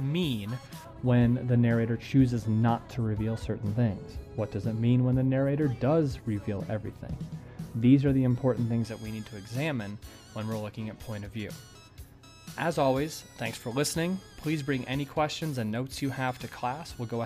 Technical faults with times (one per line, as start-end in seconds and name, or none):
0.85-8.85 de-emphasis applied wrongly